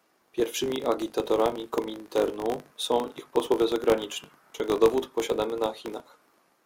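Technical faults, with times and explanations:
Throughout: filter restarted on every block. The filter's state clears every 20 ms, so each block starts with a transient, producing a 50 Hz buzz that follows the speech level.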